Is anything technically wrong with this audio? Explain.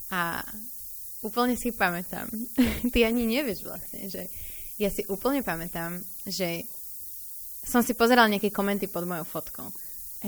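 Yes. Throughout the speech there is low bit depth with noise shaping, which points to a signal of about 7 bits. Coarse rounding at that depth leaves a large error, and feedback pushes that error upward in frequency. The result is a steady, thin hiss sitting only roughly 10 dB below the speech and rising sharply toward the top of the band. Plain tape or microphone hiss is flatter, and unshaped truncation sounds grittier and follows the signal.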